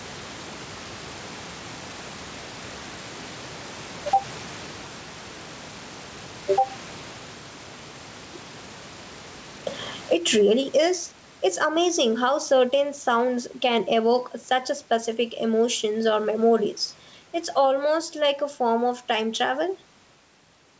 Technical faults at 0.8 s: gain pumping

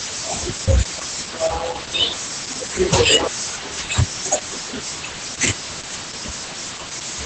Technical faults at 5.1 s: Opus voice compression

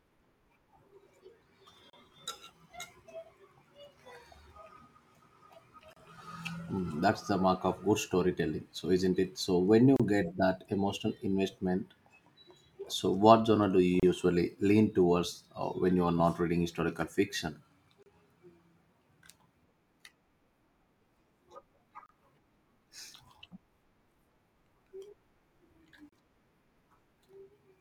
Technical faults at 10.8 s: none

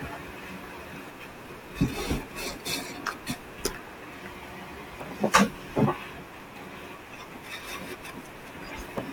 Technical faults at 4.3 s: none

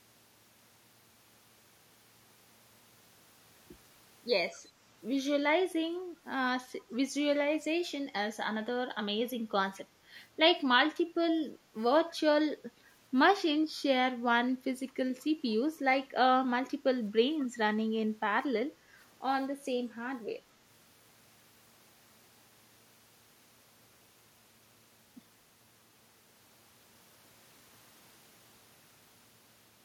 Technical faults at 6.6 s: none

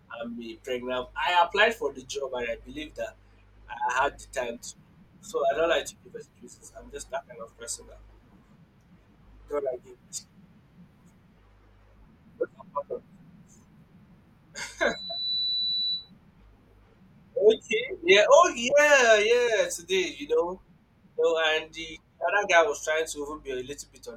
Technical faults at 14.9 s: loudspeaker feedback squeal

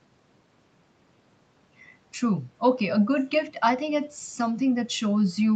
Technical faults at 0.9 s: none

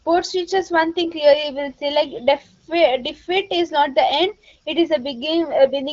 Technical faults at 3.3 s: none

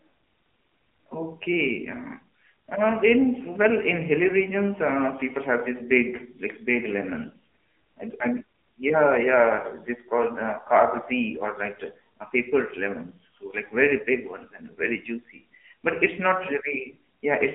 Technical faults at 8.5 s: AMR narrowband mobile codec

